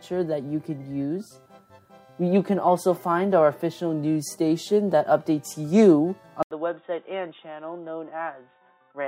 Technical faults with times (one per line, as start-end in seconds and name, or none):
6.43-9.07 input switched to a poorer device